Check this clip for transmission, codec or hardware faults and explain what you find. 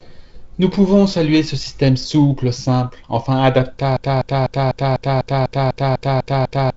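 One fault is present: a broken-record loop near the end. The clip carries the band limit of G.722 wideband telephone coding, with nothing above about 7.8 kHz.

At 3.97 s, just after "système souple simple enfin", the audio locks into a repeat. A fragment about 0.25 s long plays back to back, eleven times, until the clip ends. The likely cause is a stalled player or stream resending the last fragment it held. The speech due in those seconds is lost. What remains is a rapid, mechanical stutter.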